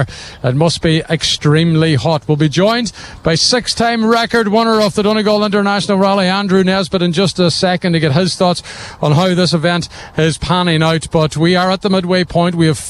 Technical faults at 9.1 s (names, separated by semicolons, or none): none